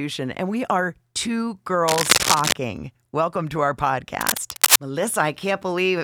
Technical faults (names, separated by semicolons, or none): cable scratch noise